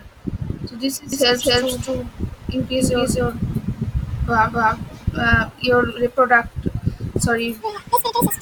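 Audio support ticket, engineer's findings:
Doubled audio track, 1.13–5.43 s, from just after "so this": full-band echo trailing by roughly a third of a second, near equal level, dry, abrupt on and off. Likely a second slower capture path or misaligned edit copy.

Section at the wrong speed, 7.61 s to end: sound abruptly high and hurried, 1.86x speed, pitch up around ten semitones. Likely playback or edit stage running this segment on the wrong clock.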